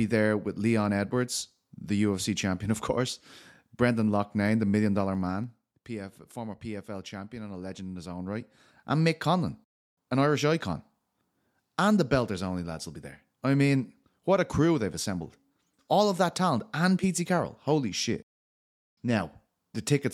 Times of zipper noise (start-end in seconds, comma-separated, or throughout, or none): 4.93-5.98, 8.15-8.74